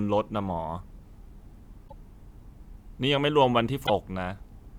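At 1.84 to 1.93 s and again at 3.83 to 3.90 s, damaged data in the compressed stream makes the decoder misread frames and hunt for the next header, producing brief glitches in the speech.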